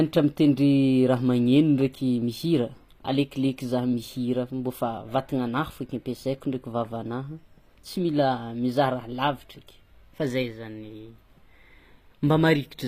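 From start to finish the whole recording has that HE-AAC compression sound. The treble doesn't quite belong to the voice; the s sounds come out gritty and metallic, and nothing reaches above about 15.4 kHz. That's likely spectral band replication at work, with the codec coding only the lower band and copying it upward under a coarse envelope, so the upper harmonics don't line up. The damage is plainly audible, which fits a low bitrate somewhere around 24 kbps.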